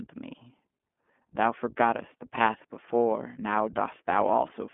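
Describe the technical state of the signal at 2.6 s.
At 2.6 s you're hearing the iLBC codec, present throughout: narrowband, nothing above 3.7 kHz, and independently coded 20 ms frames give a plainly rough, slightly synthetic edge, which fits the 15.2 kbps mode.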